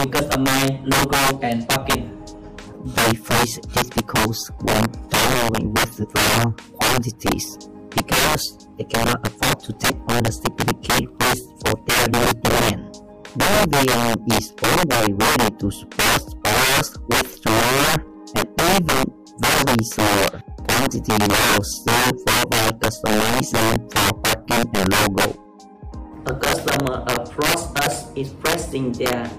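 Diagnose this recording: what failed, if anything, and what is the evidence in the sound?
Integer overflow at the sample-format or gain stage runs through the whole recording. Driven about 9 dB too hot, roughly 7 percent of samples wrap to the opposite extreme instead of being held at full scale. Loud peaks therefore crack violently, far harsher than the flattened buzz of clipping.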